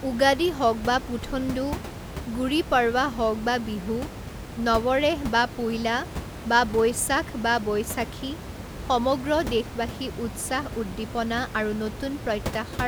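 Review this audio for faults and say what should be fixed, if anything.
No faults turn up in this audio, so nothing needs to be fixed.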